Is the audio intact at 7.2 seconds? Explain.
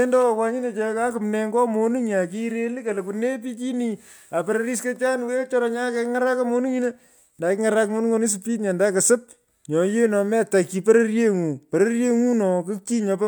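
Yes, the speech at 7.2 seconds is intact, with no dropout, click, distortion or other fault audible at that moment.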